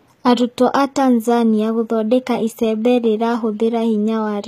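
Throughout the speech, the treble is rebuilt rather than coded, likely from HE-AAC compression at a low bitrate such as 20 kbps. Lower bands are copied upward, so sibilants sound gritty and metallic, with nothing above 14.9 kHz.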